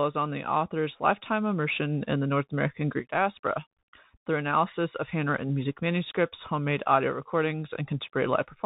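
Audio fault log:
Throughout: Bluetooth CVSD headset codec. Speech sounds narrow and boxy, with nothing above 4 kHz, a grainy hiss beneath, scratchy s sounds and loud bright passages breaking up. A one-bit up-or-down coder, fitting a 64 kbps headset link, cannot step fast enough to follow them.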